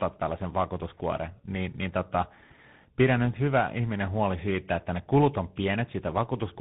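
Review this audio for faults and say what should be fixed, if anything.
Tandem speech coding runs through the whole clip. The speech sounds rough, muffled and warbly, with nothing above about 3.8 kHz. That points to a chain like GSM full rate, then G.711 mu-law, then CVSD, where each border decodes and re-encodes. Two actual speech coders in a row means the second one is working on an already degraded signal, so the damage compounds. To prevent it, keep the call in one codec end to end, or pass the coded stream through transparently instead of transcoding at each link.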